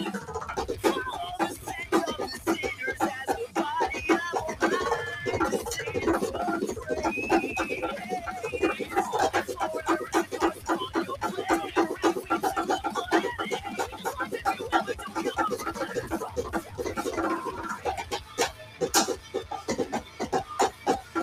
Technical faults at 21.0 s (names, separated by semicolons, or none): noise suppressor applied to music or sounds; sound cut by the noise suppressor